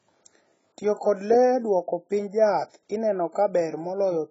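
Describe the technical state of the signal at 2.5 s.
At 2.5 s the speech carries the heavy smearing present throughout the clip, likely from AAC compression at a very low bitrate, around 16 kbps. A spectrogram shows nothing above 7.7 kHz and bands below that are left as holes or filled with substitute noise, heard as dull, warbling, fizzy sibilants.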